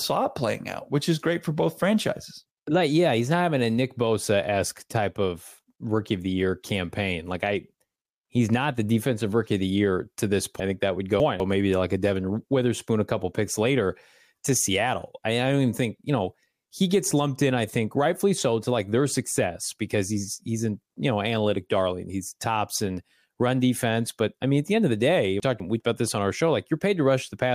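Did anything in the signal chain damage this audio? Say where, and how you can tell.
Yes. Chunks out of order, at the buffer or network stage. After "the year to this", 10.6 to 11.4 s jumbles. One chunk plays three places late. After "end of the day", 25.4 to 25.8 s repeats this with a one-chunk delay. Nothing is missing. The hard joins fit 200 ms chunks.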